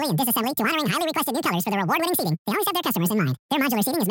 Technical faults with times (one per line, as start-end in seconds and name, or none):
0.00-4.10 audio read two samples at a time (double speed)